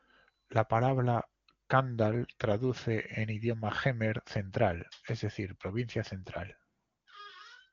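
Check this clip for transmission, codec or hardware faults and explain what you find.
No faults found here.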